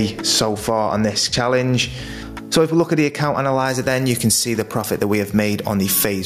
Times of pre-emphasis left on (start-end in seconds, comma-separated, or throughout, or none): 3.66-6.26